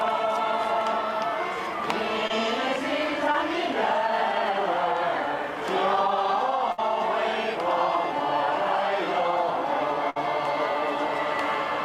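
At 2.27 to 2.31 s and 3.32 to 3.36 s, short concealed packet loss leaves brief smears: about 20 ms of audio arrived too late, so the receiver extended the preceding sound to bridge each gap before blending back, the second stretching timing by a few milliseconds.

At 6.72 to 6.80 s and 10.10 to 10.18 s, a burst of packet loss removes about 60 ms each time. The receiver sustained the last sound while fading it down, then playback jumps ahead, with that stretch of audio gone.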